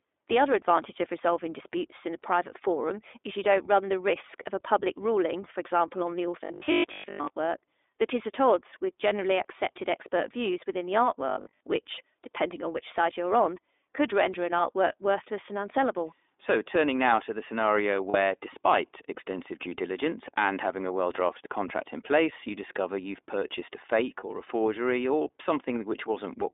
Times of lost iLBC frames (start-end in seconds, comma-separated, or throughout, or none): 18.10-18.16, 24.20-24.23